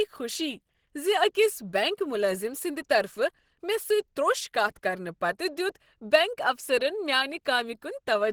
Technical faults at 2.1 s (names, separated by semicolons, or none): Opus compression